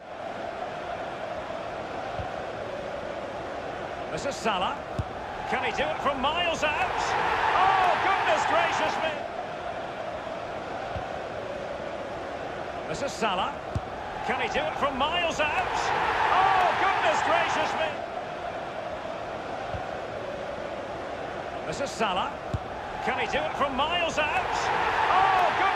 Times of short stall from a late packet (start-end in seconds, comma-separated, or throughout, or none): none